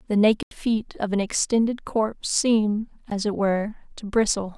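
At 0.43 s the speech drops into a block of digital silence lasting 85 ms, which fits a 2048-sample buffer left unfilled, cut in and out with no fade. A second, 14 ms dropout at 3.10 s registers as a brief tick.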